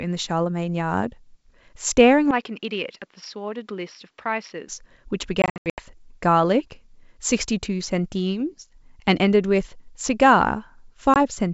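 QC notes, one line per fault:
2.31–4.69 s, input switched to a poorer device: the sound suddenly goes duller and quieter, down about 10 dB, with nothing above 5.7 kHz and a faint new noise floor. There's no gap at the change, so it's likely a switch to a narrower-band mic mid-recording.
5.42–5.82 s and 11.14–11.17 s, packet loss on an ADPCM call: the first patch has about 260 ms of hard-edged dropouts scattered over 360 ms, the longest hole 80 ms. That points to roughly a dozen or more lost packets. The second is a single short hole. After each gap the G.722 ADPCM decoder's predictor and step size are out of step with the sender's, so the sound comes back slightly distorted before settling.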